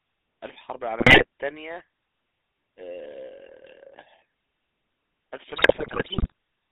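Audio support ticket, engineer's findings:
GSM full-rate codec, whole clip: buzzy, gravelly roughness on the speech, band limited to about 200 Hz to 3.7 kHz. Pulse-excited vocal-tract model, consistent with the 13 kbps full-rate coder. Unlike plain narrowband telephone filtering, the grit sits inside the voice itself.

GSM bit errors, 1.00 to 1.25 s and 5.56 to 6.32 s: squawks, pops and gargling, with the second burst longer. Corrupted filter, pitch and gain parameters reaching the decoder distort the spectrum and spike the level frame by frame. Unlike dropouts, the sound garbles rather than going silent.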